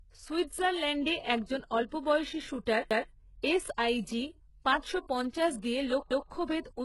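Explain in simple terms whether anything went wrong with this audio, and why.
Overlapping chunks, at 2.91 to 3.11 s and again at 6.11 to 6.31 s: the audio was handled in pieces about 3 seconds long, and each new piece began before the previous one finished. So a fifth of a second plays twice at each join, heard as a stutter.

HE-AAC compression, throughout the clip: the speech is likely squeezed hard by this codec, which keeps only the lower sounds and rebuilds the treble by copying them upward. Nothing remains above 11.5 kHz, and the rebuilt top end leaves s sounds gritty and lispy.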